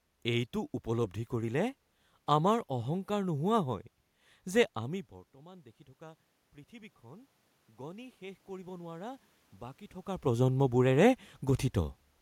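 From 4.84 to 9.28 s the automatic gain rising is audible: after the input fell by about 21 dB, when the talker moved back around 5 s, the gain control climbed about 8 dB over several seconds. Unlike simple talker movement, the room noise swells together with the voice.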